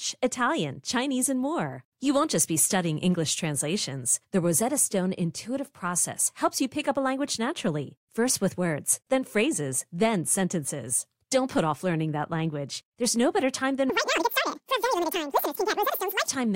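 Audio read two samples at a time (double speed) hits this speech clip from 13.90 s to 16.28 s, straight after "no better time". For that stretch the reader takes each pair of samples as a single frame, as if the stream held two channels or samples twice as wide. Playback therefore runs at 2x speed and jumps 12 semitones, a full octave.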